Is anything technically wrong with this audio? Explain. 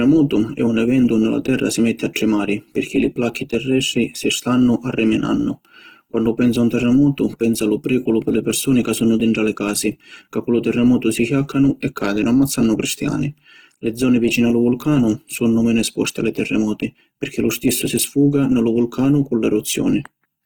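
Yes, throughout the speech there's plainly audible grainy, rough texture, likely from Opus compression. Short of bits in its CELT music mode, it refills bands with folded or noise content instead of leaving gaps, so tones turn noisy; the damage fits roughly 16 kbps.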